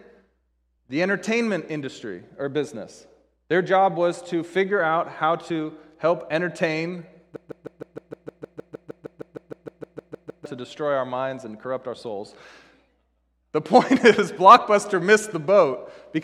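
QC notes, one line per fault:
7.36 to 10.46 s, broken-record loop: right after "how to help entertain", a fragment of about 155 ms repeats exactly, back to back, 20 times, until "to destroy our minds" resumes. The stuck, stuttering repetition is likely a stalled player or stream resending its last held fragment, and the speech that belonged in those three seconds is lost. A spectrogram shows one identical block tiled at a 155 ms period, and the waveform shows one repeated shape.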